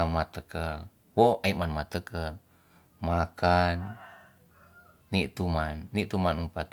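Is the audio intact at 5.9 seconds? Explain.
Yes, the speech at 5.9 seconds plays through intact, with no dropout, click or distortion at that point.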